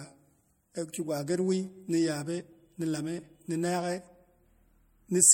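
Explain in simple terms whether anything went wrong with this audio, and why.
The speech sounds watery and a bit swirly from start to finish, with dull treble and smeared s sounds. That points to MP3 compression, likely squeezed too hard, so the encoder chopped off the highs and let weak detail flicker in and out.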